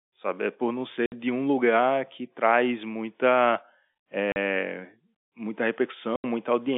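At 1.06 s, between "por não" and "de um lugar que", then at 4.32 s and 6.16 s, the telephone-band speech drops into packet loss filled with silence: gaps of 60, 40 and 80 ms with abrupt edges. These are dead holes rather than smeared or repeated audio, and their lengths fit whole 20 ms packets.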